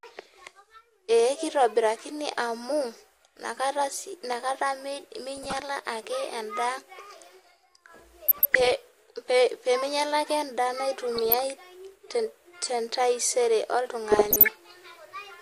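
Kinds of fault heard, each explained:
DAB burbling: bit errors slipping past error correction in weak reception corrupt MP2 scale factors and samples, so individual sub-bands jump in level for up to a frame. Here the speech picks up short blips of noise in single sub-bands in four bursts, around 5.4, 8.3 to 8.7, 11.1 and 14.1 to 14.6 s.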